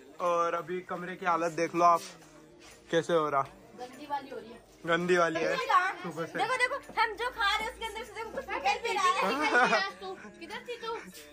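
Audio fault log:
5.34 s, stream segment skipped: the sound jumps abruptly ahead with a brief blip, likely because one segment failed to load and the player moved on to the next. Unlike a dropout, there is no silent gap. The audio simply resumes at a later point.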